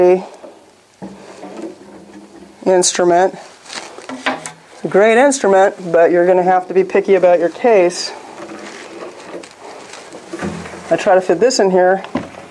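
Nothing in the recording stood out as a technical problem on listening.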